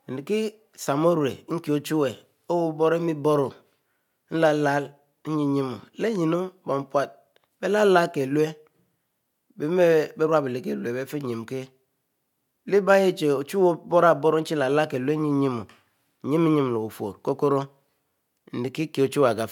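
A speech recording, with no technical faults to be heard anywhere in it. No times or causes need reporting, since nothing in the signal calls for them.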